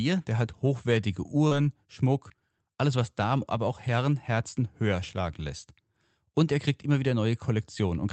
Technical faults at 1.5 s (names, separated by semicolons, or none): short concealed packet loss